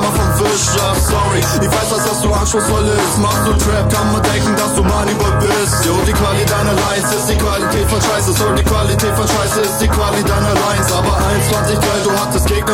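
No technical faults are audible anywhere in this audio.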